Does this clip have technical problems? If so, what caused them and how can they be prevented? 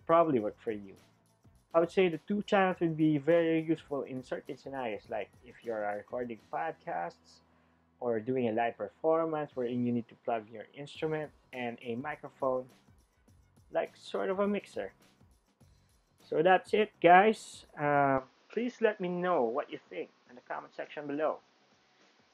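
Yes. From 18.18 s to the end the sound abruptly dulls, with nothing above 6.9 kHz, and a faint new noise floor appears, likely from the input switched to a poorer device. A codec bandwidth drop narrows the band without adding its own noise. Lock the recording input to prevent it.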